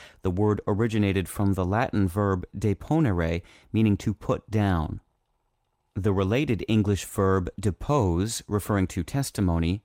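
Nothing in the speech stood out as a technical problem on listening.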